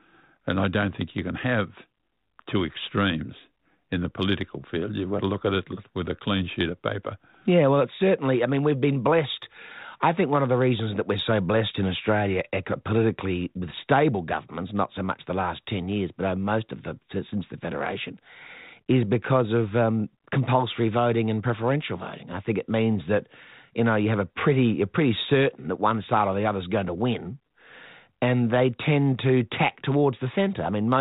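No technical faults can be heard in the speech, which comes through the G.726 ADPCM telephone coding at 32 kbit/s.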